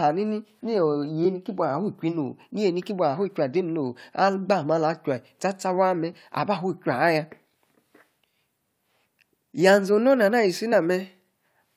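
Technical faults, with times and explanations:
1.24–1.26 s and 10.72 s, damaged data in a compressed stream: corrupted bytes make the decoder misread those frames and lose sync until it finds a valid header, producing brief glitches. On a spectrogram each shows as a thin broadband vertical smear; the waveform shows a short, jagged discontinuity.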